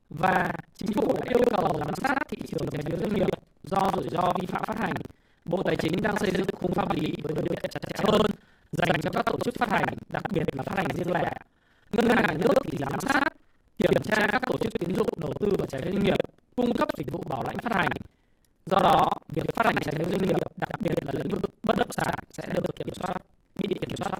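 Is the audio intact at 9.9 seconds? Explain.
No. At 9.9 seconds the speech is affected by buffer tearing, which runs through the whole clip. The writing program and the playback hardware have drifted so that they cross inside each buffer, leaving roughly 40 percent of it holding audio about a tenth of a second old, with hard joins on both sides. That produces a steady 21.5 Hz robotic rattle, which fits a 2048-sample buffer. Unlike underrun dropouts, there are no silent gaps. The stale audio is replayed, and the buzz disappears whenever the signal stops.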